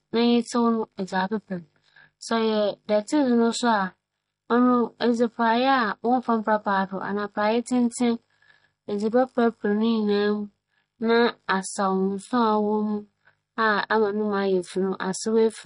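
Likely MP3 compression at a low bitrate, roughly 40 kbps, running the full length of the speech: the encoder discards everything above 10.6 kHz, dulling the top end, and drops weak frequency detail frame by frame, leaving a plainly audible watery, swirling texture and smeared consonants.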